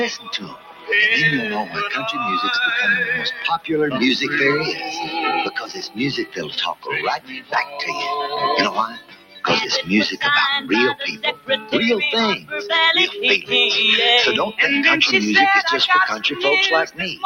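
From the opening the sound pumps and thins out. Held material and decaying tails keep sagging while sharper onsets hold their level, so the texture flutters with swings of around 15 dB. This is a noise suppressor applied to music or sounds: a processor tuned for speech is treating steady tones, ambience and reverberation as background noise and pulling them down, leaving mainly the attacks intact.

Within that, eight passages drop away more sharply, each a sound cut by the noise suppressor: 0.16 to 0.9 s (about 16 dB), 3.33 to 3.69 s (about 15 dB), 5.54 to 5.99 s (about 13 dB), 6.24 to 6.58 s (about 14 dB), 6.74 to 6.89 s (about 16 dB), 7.17 to 7.79 s (about 15 dB), 8.88 to 9.44 s (about 16 dB) and 11.16 to 11.73 s (about 13 dB). In each, sustained or fading sound sinks or its decay is cut short, because the suppressor judged those stretches to be noise and attenuated them harder than the rest.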